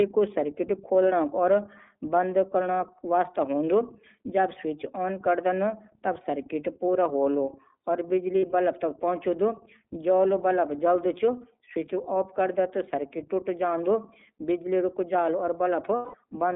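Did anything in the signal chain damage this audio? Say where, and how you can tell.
Yes. The codec stage shaped the whole clip. This is the iLBC codec. Speech is confined to about 200 Hz to 3.7 kHz and sounds rough and synthetic throughout. The texture fits iLBC's 13.33 kbps mode, coding each 30 ms frame independently.

The network stage caused lost iLBC frames. At 8.40 to 8.43 s, a brief gap fits one dropped 30 ms frame. At 15.96 to 16.15 s, about six frames vanish. The decoder repeats the last pitch cycle with noise, so each gap sounds like a held, buzzy vowel. The longer one fades. Speech recovers almost immediately because each frame stands alone.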